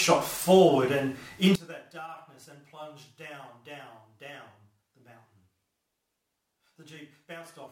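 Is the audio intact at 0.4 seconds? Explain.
Yes, the audio is intact at 0.4 seconds, with no fault audible at that point.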